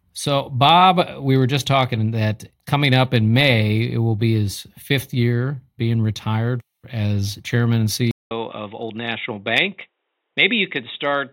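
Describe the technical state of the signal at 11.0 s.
At 11.0 s we're inside a stretch that starts at 8.11 s, right after "retired as chairman and", and runs to the end of the clip. It sounds like the input switched to a poorer device, likely a headset or a lesser mic taking over. There's a 200 ms gap at the switch, then the sound goes boxy and dull, with nothing above 3.8 kHz, a drop of roughly 5 dB, and a new noise floor sitting around 55 dB down.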